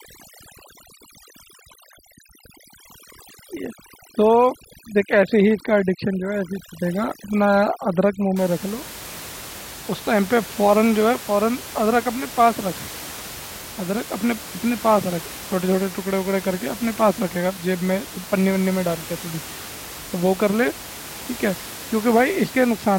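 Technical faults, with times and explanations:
0.0 to 8.36 s, overdone noise removal: a noise reduction stage is set far too aggressively, so any frequency band that sits close to its noise estimate is pushed right down or switched off, and the softer parts of the speech are swept away with it. The room noise, lying about 15 dB below the speech, drops and breaks up into twinkling specks.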